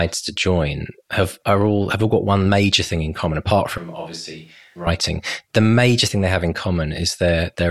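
At 3.78 s the speech turns suddenly roomy and hollow. The bass thins and the level drops about 10 dB. Room noise comes up, roughly 30 dB below the speech. At 4.87 s it snaps back. This is likely a switch to a distant microphone.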